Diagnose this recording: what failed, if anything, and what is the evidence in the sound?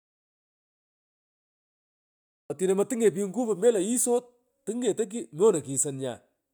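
An audio dropout to silence runs from the start to 2.50 s: flat waveform, blank spectrogram, no room tone, likely a lost input link.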